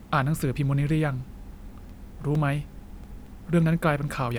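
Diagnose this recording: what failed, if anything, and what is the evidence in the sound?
A disc scratch in playback, CD scratch ticks: seven brief ticks of a few milliseconds, about five per second, from 1.89 to 3.27 s in the speech, where uncorrectable samples were interpolated or muted.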